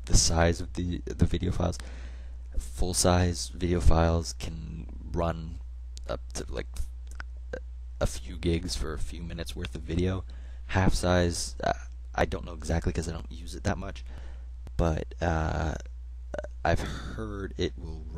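No technical faults can be heard anywhere in the recording; the signal holds steady with no interruptions, distortion or other defects at any point.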